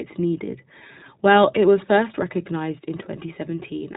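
From start to finish the speech passes through the iLBC codec: nothing above about 3.9 kHz survives, and voiced sounds take on a plainly rough, synthetic grain. Unlike a simple low-pass filter, the damage comes in short independent coding blocks, which fits 20 ms frames at around 15.2 kbps.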